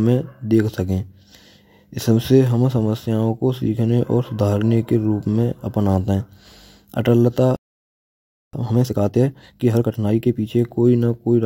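At 7.56 s the speech cuts out mid-flow and stays silent for about 0.97 s, until 8.53 s. This is a playback stall, likely from the player running out of buffered data. From 8.53 s to 10.47 s a time-compressed catch-up follows: the player trims and cross-fades small segments to clear its backlog, so the speech runs at about 1.5 times speed at normal pitch.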